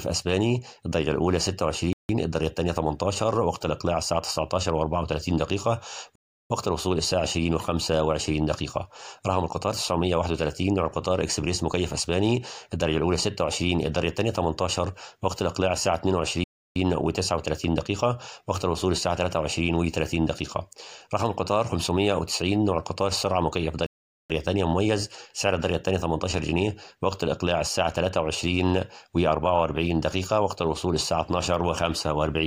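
The audio cuts to silence at 1.93, 6.15, 16.44 and 23.86 s, for 0.16 to 0.43 s each. These are likely Bluetooth stalls, where the buffer ran dry.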